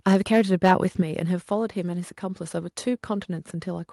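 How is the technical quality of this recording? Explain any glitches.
Two glitches mar the start of the recording.

Microphone overload, 0.06 to 0.74 s: the loudest speech peaks hit a hard ceiling, a few percent of samples flattened, adding harsh crackle, likely from input volume set about 5 dB too high.

Microphone volume stepped down, 1.02 s: speech and background suddenly drop by about 5 dB, likely the call software lowering the microphone's input volume after detecting that overload.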